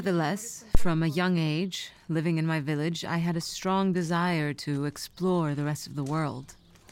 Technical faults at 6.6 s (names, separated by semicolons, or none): none